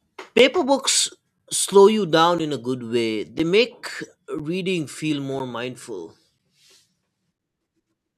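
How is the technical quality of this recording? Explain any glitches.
The recording has one recurring glitch. From 0.38 s to 7.39 s there are periodic USB or driver dropouts, once every 1.0 s, about seven in all. Each time the interface or driver stalls, roughly 10 ms of speech is replaced by silence, producing a tick or pop. The metronome-like one-second spacing, rather than scattered timing, distinguishes this from random network or buffer underrun dropouts.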